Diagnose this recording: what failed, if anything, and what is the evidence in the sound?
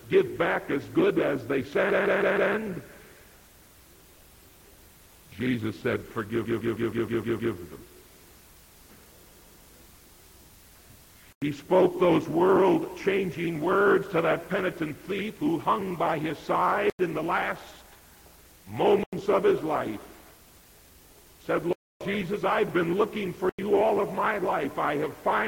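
The repeated frames come from the codec or storage stage. A 157 ms chunk stutters at 1.90–2.52 s (four extra plays), 6.44–7.54 s (seven) and 9.34–9.65 s (two). The same compressed frames got written more than once, lengthening the audio.

The blocks of digital silence point to the driver or buffer stage. There are clean dropouts at 11.33, 16.90, 19.04 and 23.49 s, each about 93 ms, which fits an unfilled 4096-sample buffer. At 21.73–22.01 s there is a longer hole, about 279 ms, roughly three buffers missed in a row.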